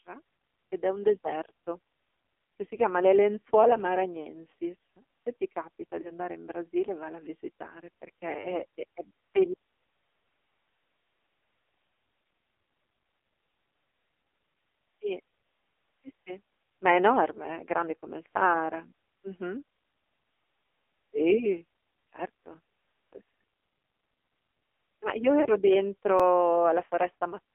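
Throughout, the speech passes through the AMR narrowband mobile codec. Only about 300 Hz to 3.5 kHz survives. The heavy buzzy, synthetic tone fits the low 5.9 kbps mode.

Lost AMR speech frames occur at 6.02, 8.42, 14.22, 16.48 and 25.42 s. Each is one 20 ms frame. The decoder repeats old settings at lower gain, giving a brief dip or warble.

At 26.20 s there is a tiny jump forward in the sound. A dropped buffer (overrun) is the likely cause, removing a sliver of a couple of milliseconds.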